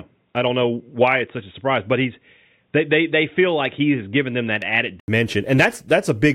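From the start to 5.08 s the speech is dull and boxy, with nothing above 3.8 kHz, a few decibels quieter and over a faint different noise floor. At 5.08 s an 80 ms silence precedes full clarity. That combined shift of tone, level and noise, rather than bandwidth alone, points to the input likely switched to a poorer device.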